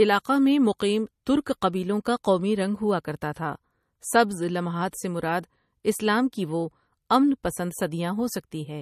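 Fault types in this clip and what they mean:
Low-bitrate audio saved at a high bitrate: the speech has nothing above 14.1 kHz throughout and keeps its coarse MP3 artefacts, likely from a low-bitrate encode (around 40 kbit/s) re-saved near 275 kbit/s. Unlike a plain low-bitrate file, it is large yet no cleaner.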